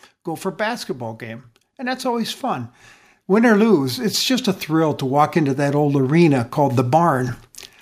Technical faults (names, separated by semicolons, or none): automatic gain rising